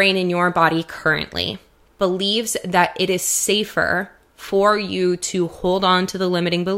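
Nothing stood out as a technical problem on listening to this speech recording.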